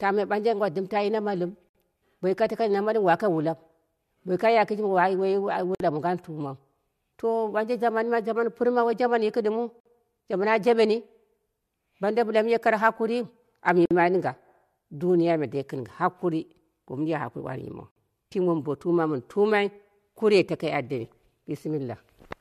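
Speech, broken by a gap at a join of encoded pieces every 4 seconds. Short silences open at 1.69, 5.75, 9.80, 13.86 and 17.91 s. The first comes after "yi na nalɨm" and lasts 61 ms. The others last 53 ms. Each has smeared edges, and the speech resumes where it stopped. The audio was encoded in 4-second pieces and joined without trimming. Each piece's encoder start delay and last-frame padding remain as silence.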